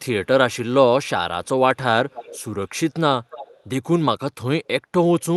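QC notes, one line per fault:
2.10–2.44 s and 3.30–3.63 s, echo leak: a faint delayed copy of the speech trails the talker by 290 ms, about 15 dB below the speech in the first stretch and about 20 dB below in the second. The lag and low level make it sound like a second voice a beat behind. The likely cause is a far-end loudspeaker whose echo canceller let part of the returned signal through.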